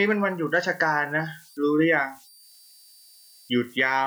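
Throughout the speech, an undithered delta-sigma converter slips into repeating bit patterns on low-level input, producing converter idle tones: a faint whistle around 5 kHz in the pauses and a grainy hiss beneath quieter passages, sitting about 32 dB below the signal.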